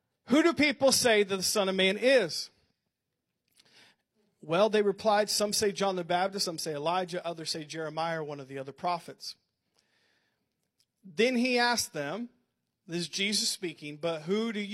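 At 6.41 to 6.47 s the speech breaks into a short chirp, squawk, click or hole, a burst of damaged data in a compressed stream. A stretch of the encoded bitstream was corrupted, so the decoder misread those frames, lost sync and hunted for the next valid frame header before resuming. On a spectrogram this appears as a narrow vertical smear of broadband or oddly banded energy about 50 ms wide. The waveform shows an abrupt discontinuity there.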